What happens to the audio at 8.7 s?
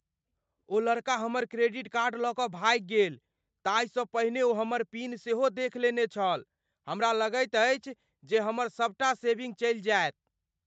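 Nothing goes wrong at 8.7 s: the speech there comes through intact, carrying only the ordinary band limit of a call, with nothing above 8 kHz.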